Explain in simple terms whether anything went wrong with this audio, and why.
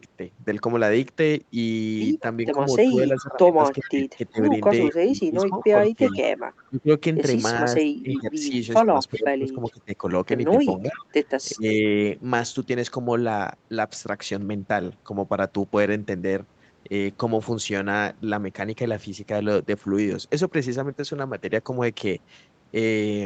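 Two problems show up, both most likely from the echo canceller on a speakerphone at the other end of the call.

The first is an echo leak. Speech coming out of that side's loudspeaker was picked up again by its microphone, and the echo canceller did not remove all of it, so some was sent back. You hear a faint, delayed copy of the speech trailing about 0.39 seconds behind, at 2.46–3.9 s, 4.89–6.69 s, 9.13–9.71 s and briefly at 10.94–11.05 s.

The second is speech suppressed in double talk. When both sides talked at once, the echo canceller could not separate the real talker from the loudspeaker echo, so it turned both down. Between 2.55 and 11.85 s, the talker's speech repeatedly dips in loudness, sometimes sharply, for roughly four seconds in total, making parts of it sound faded or briefly cut away.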